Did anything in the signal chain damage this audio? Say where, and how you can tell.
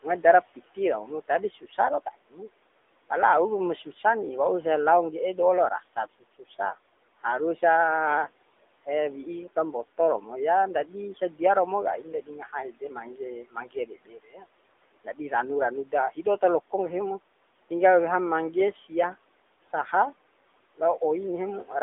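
Yes. The AMR narrowband mobile codec damages the whole clip at the codec stage. Nothing passes above 3.7 kHz, the band sits near 300 Hz to 3.6 kHz, and the buzzy, synthetic texture fits AMR-NB at about 10.2 kbps, which rebuilds speech from a vocal-tract model driven by sparse pulses.

Speech is cut by the noise suppressor during call processing at 1.51–1.79, 2.14–2.38, 5.8–6.55 s (after "do'o lao"), 12.22–12.55 s (after "ndadi sadia romo kai"), 12.71–14.47, 15.04–15.19 s (before "ranu ranu") and 16.11–16.42 s. The suppressor mistakes speech for the room noise, which sits about 21 dB down, and ducks it by about 10 to 19 dB.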